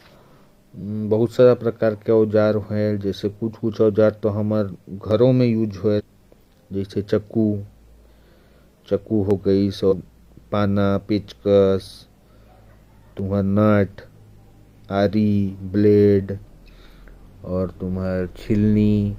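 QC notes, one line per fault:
5.11, 9.31, 13.19, 15.60 s: dropped samples. Four isolated sharp, dry clicks, each a thin vertical line across the spectrum. The likely cause is a fraction of a millisecond of samples missing, so the waveform jumps straight to a later value. Too short to remove any speech.
5.95–6.01 s and 9.88–9.94 s: compressed frames skipped. Jumps where the speech skips ahead by about 300 ms and then about 150 ms. Whole 42.7 ms codec frames were lost or rejected, so the audio resumes further on at each join.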